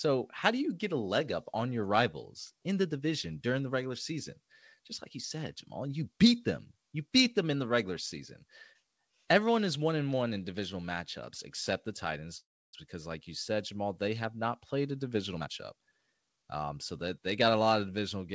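A call audio freeze hits this speech recording from 12.38 to 12.75 s, right after "divisional matchups except the" and before "because like you said": the sound briefly trails on, then drops to silence for about 0.3 s. The likely cause is delayed packets draining the jitter buffer. When they arrive, the speech resumes exactly where it stopped, so nothing is lost but roughly 0.35 s of delay is added. A jitter buffer speed-up follows from 15.34 to 16.74 s, between "have not played a" and "so that". To shed a backlog of buffered audio, the receiver repeatedly cut out short pitch-period slices, about 0.4 s in total, so the passage plays at 125% speed at unchanged pitch and sounds hurried. Throughout, the call codec's band limit leaves nothing above 8 kHz, consistent with G.722.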